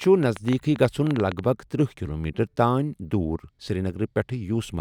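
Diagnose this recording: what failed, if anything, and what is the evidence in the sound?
A train of clicks runs from 0.04 to 1.40 s, before "بگ ترٕٛہ کِلومیٖٹر": irregular pops at about 9 per second, likely interference leaking into the analogue wiring.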